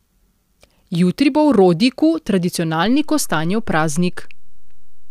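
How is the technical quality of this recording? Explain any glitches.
The recording has one glitch, a DC step at 2.86 s. The waveform's zero line jumps by about -23 dBFS and holds to the end, giving one low thump as the speech carries on.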